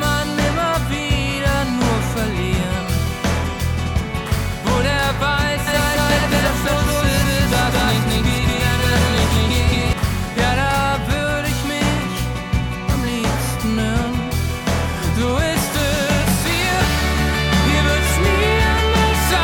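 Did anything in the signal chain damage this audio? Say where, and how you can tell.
Yes. From 5.67 to 9.93 s a doubled audio track appears: a full-band copy at roughly equal level trails the original by around 200 ms, with no decay. On a spectrogram every onset repeats one fifth-second later, and the second copy starts and stops abruptly, likely from a slower second capture path.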